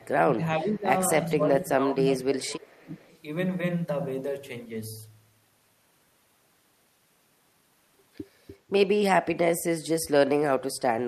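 From 0.03 to 0.88 s, the speech sinks, and it does so again from 1.35 to 3.07 s. This is speech suppressed in double talk. At its deepest, the level drops by around 20 dB. The likely cause is both sides talking at once. The echo canceller could not tell this talker from loudspeaker echo. So it turned everything down.

From 2.6 to 3.19 s, an echo leak appears. A delayed copy of the speech trails the original by about 0.41 s. It sits very low, around 35 dB below the speech. It sounds faint, like a ghost behind the talker. This is likely a far-end loudspeaker being picked up by its microphone. That side's echo canceller let a residue through, and it came back down the line.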